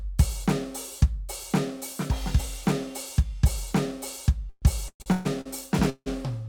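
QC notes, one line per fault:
4.49–5.48 s, repeated stalls (stutter): The music hitches five times in under a second. Each hitch holds the last sound in place before the playback carries on, with the longest hold about 130 ms. Together they add 460 ms, nearly half of this stretch. Packets arrived late or slower than playback consumed them, so the jitter buffer kept running dry and the receiver padded each wait. Nothing is lost, but the passage drags and stammers.
5.90–6.08 s, call audio freeze: The music stops advancing for 165 ms. The last sound is held and fades, and the final 60 ms or so is silent before playback resumes exactly where it left off. The pause likely comes from packets being held up in transit, so the jitter buffer emptied and the receiver filled the wait. The result adds 165 ms of delay and inserts a gap without dropping any audio.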